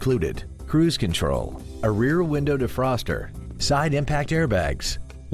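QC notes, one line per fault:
No faults detected on this clip, nothing to log.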